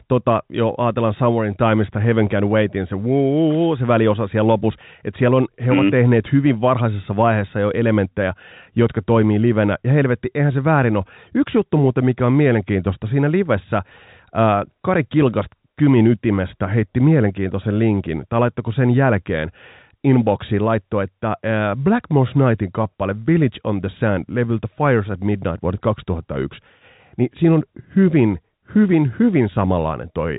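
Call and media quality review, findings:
No faults found in this speech recording. The G.711 telephone coding path is audible as narrowband telephone sound with nothing above about 3.8 kHz, and any coding damage is faint at most.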